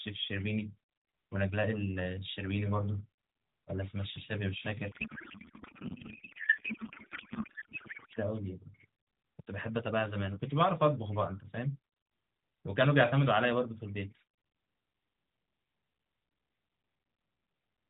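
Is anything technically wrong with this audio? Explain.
Yes. From 4.92 to 8.19 s there is a codec payload misread. The speech turns into garbled noise and warble that barely follows it. The bits are unpacked in the wrong layout, which points to octet-aligned AMR read as bandwidth-efficient. Each field lands in the wrong place.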